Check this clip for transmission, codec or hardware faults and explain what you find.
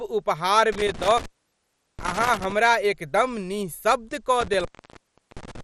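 There are two problems here: codec damage across the whole clip, and a loose connection that drops the speech out twice.

The first runs start to finish and sounds like MP2 compression, likely at a low rate, around 64 kbps. Layer II splits the signal into 32 sub-bands and hands out bits, and when bits run short the top bands get switched off entirely. Nothing survives above about 14.2 kHz. The bands left behind are coarsely quantised, so the speech comes out dull with that gurgly, granular texture you'd know from low-rate digital radio.

The second is an intermittent contact. It happens once between 0.72 and 2.52 s and again between 4.41 and 5.61 s. Each time, a cable or plug briefly loses its connection and the speech cuts out. The open stretches last roughly 0.73 s and 0.72 s. You get crackle at the edges where the contact scrapes open and closed, and faint hiss fills the gap while the line is broken.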